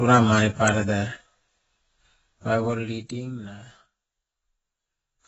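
AAC compression runs throughout the speech, from start to finish. The sound is heavily damaged, with nothing above 8 kHz, so it comes across dull and smeared, with a warbling, fizzy texture on sustained sounds and sibilants. The likely cause is AAC-LC coding at a very low bitrate, consistent with about 16 kbps. The encoder had too few bits to spend, so it dropped the top band and either left gaps in the spectrum or filled them with substitute noise.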